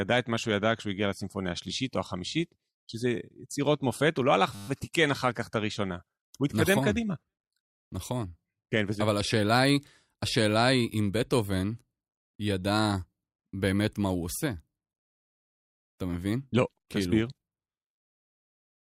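At 4.55 s the speech breaks into a system hang loop lasting until 4.68 s. The computer or audio driver stalled while the sound hardware kept replaying the same stretch of its ring buffer, so a single 10 ms piece of audio repeats exactly, 13 times. With a loop that short, the repetition fuses into a steady 100 Hz buzz rather than a stutter. Playback then resumes with essentially no audio missing.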